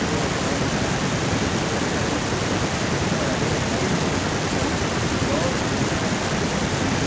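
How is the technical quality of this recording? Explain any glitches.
No glitches to report: the speech has come over a WebRTC call path with nothing above 8 kHz, which fits a wideband G.722 codec, and nothing on it points to a problem.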